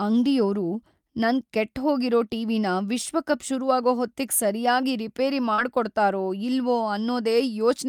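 At 5.53 s, running to 5.60 s, the speech has a short concealed packet loss. About 40 ms of audio failed to reach the decoder in time. The receiver covered the gap with roughly 44 ms of substitute sound, extending what it had last received, then blended back into the real signal. The result is a brief smear in the speech lasting about six hundredths of a second, a small wobble before the voice returns to normal.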